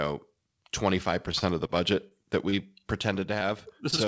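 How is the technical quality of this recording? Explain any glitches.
Packet-loss glitches occur from about 1.3 s to the end of the clip. The audio is band-limited, with nothing above 8 kHz, which fits a wideband call codec.

From 1.32 to 2.75 s there is repeated packet loss, giving a robotic sound. Eight gaps occur, the longest 26 ms. Each gap is patched by extending the previous sound, so about 60 ms of real audio goes missing. The speech turns choppy, with pieces missing.

Two short concealed packet losses occur, at 3.39 to 3.43 s and at 3.91 to 3.94 s. In each, about 20 ms never arrived. The decoder continued the last sound briefly, then blended back into the real audio. Each is heard as a quick smear or wobble.

A short stall from a late packet follows at 3.96 to 4.00 s. The jitter buffer ran empty while a packet was late. The receiver stretched the last sound for 19 ms, then resumed. 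Nothing is lost, but one sound is held too long.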